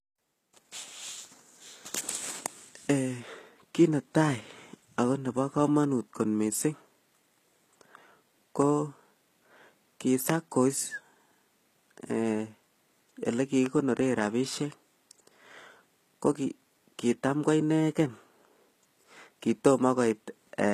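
A speech recording with two problems. It's an MP3 at a generous rate, but it carries the smeary, thin artefacts of a very low-bitrate encode underneath, so it's low-bitrate audio saved at a high bitrate. The sound fits something like 20 kbit/s HE-AAC that was likely re-encoded to 256 kbit/s MP3, which can't bring back what the first pass stripped. Then there are two loud pops, at 10.30–10.32 s and 13.66–13.68 s. The first jumps about 20 dB above the speech and the second about 10 dB, with the talking carrying on underneath. Those sharp clicks point to a brief voltage spike, likely from a plug, switch or static discharge.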